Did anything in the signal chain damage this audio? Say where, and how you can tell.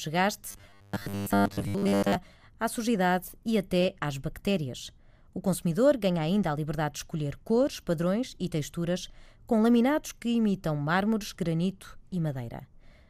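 Yes. Between 0.49 and 2.16 s the speech turns into robotic sound from repeated short buffers. It becomes a rigid, metallic buzz locked at 100 Hz that only loosely tracks the speech. The damage is likely at the driver or buffer stage. New audio arrived too slowly, so the software kept replaying the last chunk while fresh audio was dropped. Roughly 70% of the audio in that span is repeats. The 100 Hz pitch points to a chunk about 10 ms long.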